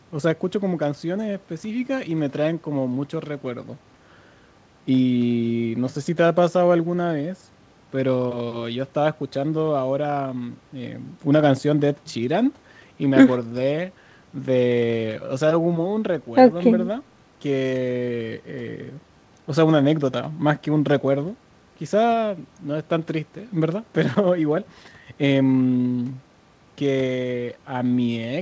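Nothing stood out on listening to this speech, which comes over a G.722 call path with no content above about 8 kHz.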